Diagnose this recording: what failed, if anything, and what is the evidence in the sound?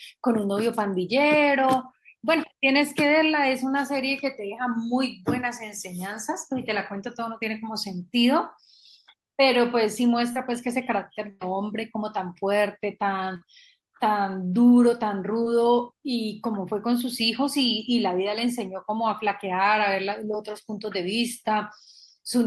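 The network dropped packets, and at 10.32 to 10.36 s you can hear a short concealed packet loss: about 30 ms of the speech never arrived, so the decoder stretched the preceding sound across the hole and blended back, leaving a quick smear rather than a gap.

There are also two bursts of packet loss, again on the network side. At 11.30 to 11.42 s roughly 110 ms went missing, and at 13.36 to 13.42 s about 50 ms. The receiver held the last sound, fading it, then jumped ahead with that stretch of speech gone.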